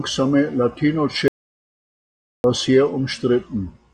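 At 1.28 s the speech cuts off abruptly and stays gone until 2.44 s, an audio dropout to silence lasting about 1.16 s. The gap is dead, with no room tone or hiss, so whatever was being said there is lost. The likely cause is the input being interrupted while the recorder kept writing silence. On a waveform it is a flat line; a spectrogram shows a dark band with hard vertical edges.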